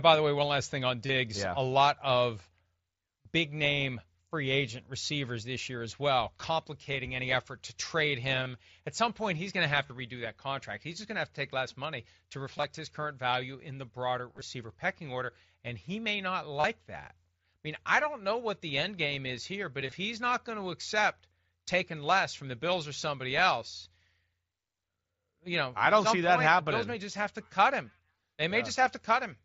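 Brief buzzy, held tones replace the speech at 1.06, 3.23, 8.43, 9.87 and 16.60 s, each lasting about 20 to 40 ms and ending in a slight warble, with broken, stuttering patches from 12.57 to 12.64 s, 14.32 to 14.41 s and 19.81 to 19.92 s. This is concealed Bluetooth headset packet loss. Voice packets from the headset dropped out, and the phone filled each gap by repeating the best-matching stretch of the preceding waveform over the wideband mSBC link.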